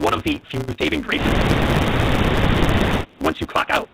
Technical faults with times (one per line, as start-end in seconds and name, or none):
0.00-3.93 block size mismatch (truncated)
0.59-0.69 call audio freeze
0.73-0.79 burst of packet loss
1.31-2.74 speech suppressed in double talk